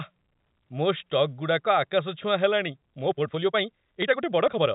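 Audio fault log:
2.65–4.74 s, time-stretched section: from here to the end the pace jumps to 1.6 times faster but the pitch holds, so it sounds rushed, likely software squeezing the audio to fit a length by dropping short slices.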